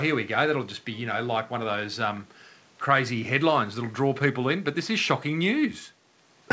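Nothing stood out on listening to this speech recording, which carries faint room noise about 34 dB below the voice and, having come through a G.722 call path, has no content above 8 kHz.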